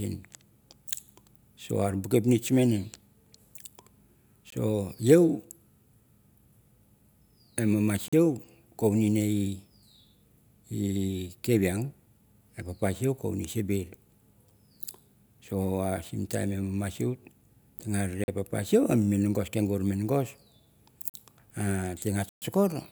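Whole blocks of samples are replaced by zeros, leaving blocks of digital silence. The sound cuts out and back with no fade. At 4.50 s there is a 19 ms gap. Three 43 ms holes follow, at 8.08 s just after "e mama", at 18.24 s just before "papa sieu", and at 21.10 s. Their matching length fits a 2048-sample buffer. A longer 128 ms hole at 22.29 to 22.42 s is heard as a short hole.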